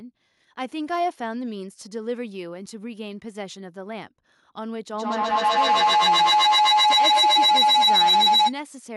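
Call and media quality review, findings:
Feedback howl, 4.95–8.59 s. Acoustic loop between two endpoints sharing one room: mic pickup of the other device's loudspeaker, loop gain above unity. Each pass louder, narrowing to a tone around 1 kHz, loop repeating roughly every 150 ms, peaking about 12 dB over speech. Stops at 8.59 s.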